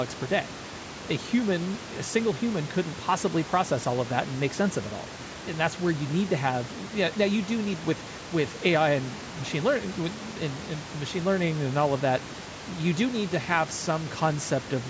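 No technical faults can be heard anywhere in the recording. The speech has gone through a call's microphone processing, which leaves nothing above 8 kHz, and room noise sits about 16 dB below the voice.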